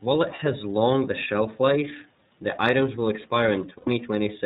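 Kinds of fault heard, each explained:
iLBC codec: The whole clip has passed through the narrowband iLBC codec, with its damage plainly audible. Each 30 ms frame is coded on its own, at a rate that fits the 13.33 kbps mode, and everything above 4 kHz is gone. The speech sounds clear but somewhat rough and synthetic. On a spectrogram the energy stops flat at 4 kHz, and the harmonics look slightly smeared from frame to frame.
Lost iLBC frames: Packets went missing twice, and each time the decoder filled the gap by repeating the last pitch cycle mixed with noise. The first loss, at 0.36 s, covers one 30 ms frame. The second runs from 3.78 to 3.88 s, about 90 ms or three frames, and fades as it goes on. Both gaps sound like a held, faintly buzzy vowel, and the speech recovers almost at once. On a waveform the gap shows as evenly repeated cycles, and on a spectrogram as flat, unchanging harmonic bands.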